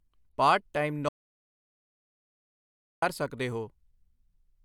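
A speech clip where the input signal was likely lost, with silence recorded instead: after "ਪਾਰਟ ਟਾਈਮ" the audio drops out to dead silence from 1.09 to 3.02 s, removing about 1.9 s of speech.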